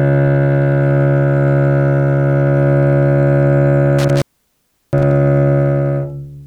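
A loose connection opened briefly between 3.99 and 5.11 s, an intermittent contact: the sound drops out for about 0.71 s with crackle at the edges and faint hiss.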